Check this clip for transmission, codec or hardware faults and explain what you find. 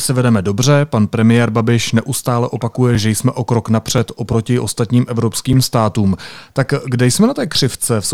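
Three short blocks of digital silence interrupt the speech. At 2.95 s, between "neustále opakuje" and "že jsme o krok", about 2.7 ms drops out, which fits a 128-sample buffer at 48 kHz. At 3.98 s, just before "oproti ostatním", a 1.4 ms gap appears. At 5.53 s, after "oproti ostatním", a 5.3 ms gap fits a 256-sample buffer. Output buffers likely went out unfilled, so the signal drops abruptly to zero and returns, producing sharp ticks. A waveform shows flat zero-line notches. A spectrogram shows thin full-height vertical lines at each edge.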